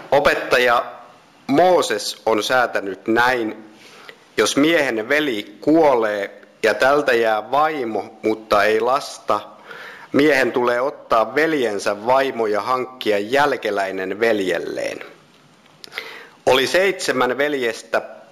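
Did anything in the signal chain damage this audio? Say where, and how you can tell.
Yes. Imaging from linear upsampling, at the sample-rate conversion stage, runs throughout. The top is dulled, with a faint mirrored copy of the band at 8 to 16 kHz, roughly 30 dB down, pointing to straight-line interpolation from 16 kHz to 48 kHz. Unlike aliasing, it reflects upward, not downward.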